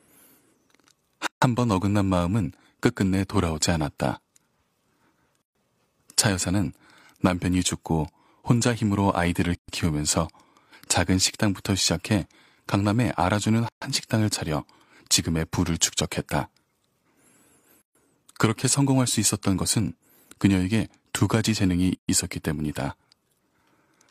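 Gaps at joins of encoded pieces open in the speech at 1.27, 5.42, 9.55, 13.69, 17.82 and 21.95 s, about every 4 s. The first lasts 153 ms; the rest last 133 ms. Separately encoded pieces were joined without trimming encoder delay and end padding. The speech stops abruptly with smeared edges, then resumes where it left off.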